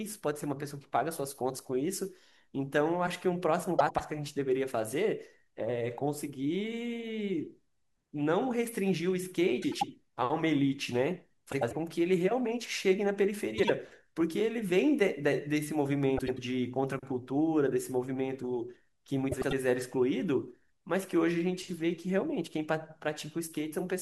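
Frames out of order occur at 3.79–4.00 s, 9.62–9.83 s, 11.52–11.73 s, 13.58–13.70 s, 16.17–16.39 s and 19.32–19.53 s. Each time, two adjacent runs of the speech stream were decoded in swapped order: 96 ms blocks in most cases, 48 ms blocks at 13.58 s. The two halves of each short stretch play back to front, giving a brief garbled flutter. No time is lost.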